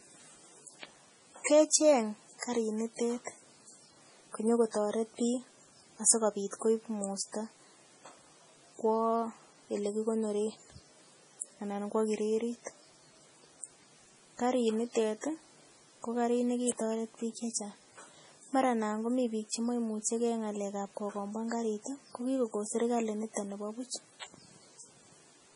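From start to finish the speech sounds watery and swirly, with a heavy smeared quality and nothing above about 10.6 kHz. This is likely MP3 compression. Short of bits, the encoder cut the treble at a fixed point and dropped weak frequency lines that flicker in and out between frames, producing the swirl. The heavy damage fits a low bitrate of around 24 kbps.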